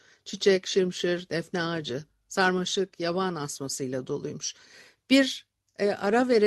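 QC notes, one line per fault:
No faults are heard in this speech clip. The WebRTC call path shows in the top end, which stops at 12 kHz, as fits an Opus call at a moderate bitrate.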